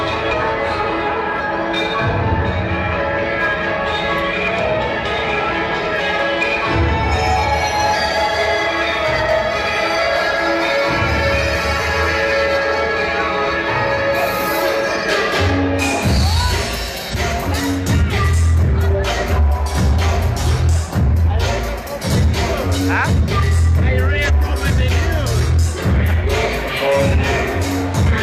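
Compressed frames skipped at 0.28, 1.35, 2.93, 5.95, 7.90, 9.94, 17.09 and 24.25 s: whole 46.4 ms frames go missing, so the audio jumps ahead by a few tenths of a second, up to half a second. The waveform shows an abrupt discontinuity, and the spectrogram shows a vertical seam.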